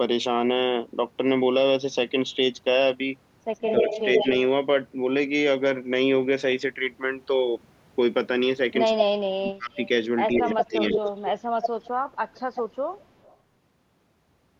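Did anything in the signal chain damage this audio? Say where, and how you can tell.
Yes. A delayed second copy of the speech trails the original from 3.56 to 4.28 s at about the same level, lagging by 134 ms. Brief scraps follow at 8.98–9.02 s (about the same level, 145 ms late) and 9.75–9.89 s (about 15 dB down, 147 ms late). A longer tail runs from 10.32 to 13.37 s, about 10 dB down at 151 ms. This is echo leak in call processing, likely a loudspeaker-side echo canceller letting its microphone pickup return.

The talker's own speech also dips while the far side's sound plays on the loudspeaker, which is speech suppressed in double talk. From 3.8 to 4.26 s it drops only slightly, about 5 dB over roughly 150 ms. From 8.95 to 9.77 s it nearly vanishes, down about 35 dB for most of that span. From 10.44 to 10.96 s it sags about 10 dB. The likely cause is the canceller failing to separate talker from echo and attenuating both.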